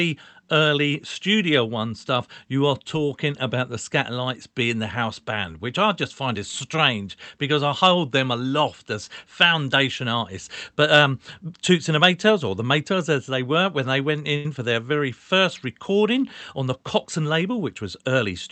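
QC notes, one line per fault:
14.36 to 14.46 s, short stall from a late packet: right after "were when they went" a sound hangs for about 82 ms until the packet shows up, then resumes at "for their" with nothing lost.
17.18 to 18.24 s, jitter buffer speed-up: the receiver trims tiny pitch-period chunks to shed the built-up delay, so this stretch runs about 6% fast at the same pitch and feels a little rushed.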